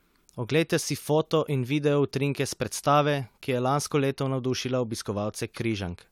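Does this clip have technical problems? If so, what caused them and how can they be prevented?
No, nothing in this speech recording points to a technical fault, so there is no cause to trace and nothing to prevent.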